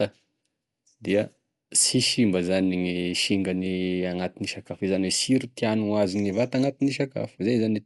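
Right from the start and all the way through, this speech sounds dull, with nothing above about 11.6 kHz, and there's a rough, fluttery grain hanging around the tonal parts. That points to Dolby Digital compression, likely at a low rate, something like 64 kbps. Starved for bits, the encoder cut the top of the band and left many frequency lines with no real detail, so the decoder padded them with dither noise. That's the flutter you hear.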